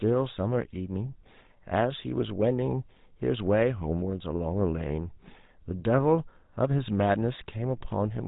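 From start to end the speech carries the sound of the GSM full-rate codec. It models the vocal tract and excites it with sparse, regularly spaced pulses, leaving a plainly audible buzzy, gravelly roughness consistent with a 13 kbps stream. Nothing above 3.8 kHz survives.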